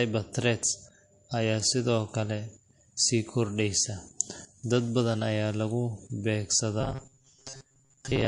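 From the first moment to the last, the speech carries the smeared, swirly texture of heavy MP3 compression, most likely low-bitrate audio saved at a high bitrate: a roughly 48 kbit/s MP3 re-encoded at 192 kbit/s. The second pass cannot restore what the first discarded, so the larger file keeps the original damage. On a spectrogram, the upper bands look blotchy and patchy, with detail missing between the stronger harmonics.

From 6.81 s to 8.27 s, the speech turns into a rigid metallic buzz at 134 Hz that still loosely tracks the syllables. This is robotic sound from repeated short buffers, likely caused by audio arriving too seldom. The playback fills each gap by looping the last fragment, about 7.5 ms long, while most of the real material is skipped. A waveform shows a short cycle repeating with a near-identical shape, and a spectrogram shows evenly spaced horizontal lines at multiples of 134 Hz.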